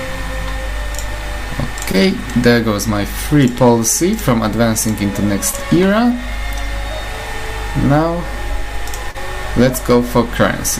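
Short concealed packet loss occurs at 1.91 to 1.95 s, 5.51 to 5.55 s and 9.11 to 9.16 s. Each time, a stretch of audio arrived too late for the decoder: 20 ms in the first two and 40 ms in the third. The receiver patched each gap by extending the preceding sound before blending back into the real signal. The repairs come through as brief smears or wobbles, with the third gap the longest.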